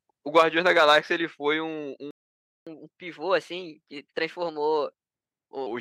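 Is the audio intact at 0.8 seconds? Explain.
No. At 0.8 seconds the speech falls inside a stretch of microphone overload running from 0.37 to 0.97 s. The loudest peaks there are flattened at the converter's limit, with a harsh, crackling grit riding on the strongest syllables. The likely cause is an input gain set too high, so the signal overshot the converter's limit by about 4 dB and the tops of its waveform were sheared off, affecting around one percent of samples.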